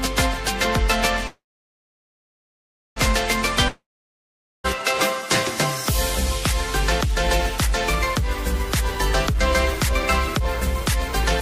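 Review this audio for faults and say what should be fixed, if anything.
A call audio freeze runs from 1.27 to 2.98 s. The last sound is stretched into a brief fading buzz or hiss, then about 1.57 s of silence, likely because packets stalled and the jitter buffer emptied. Playback resumes where it stopped, nothing is lost, and the delay grows by 1.69 s. Preventing it means improving network stability or using a deeper adaptive jitter buffer.

A long network dropout runs from 3.68 to 4.66 s. The sound decays into a fading buzz or hiss and then about 0.83 s of silence. When audio returns, roughly 0.96 s has been skipped, likely because that stretch never arrived at the receiver. Preventing it means fixing the link loss, for example with redundancy or forward error correction.

A jitter buffer speed-up runs from 8.70 to 11.26 s. Holding more audio than it aims for, the receiver repeatedly cuts pitch-period-sized slices to shrink its delay, so the audio plays at 107% speed with unchanged pitch. 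Around a fifth of a second is removed, and the passage sounds hurried. Preventing it means smoother delay recovery, with gentler, less frequent time compression.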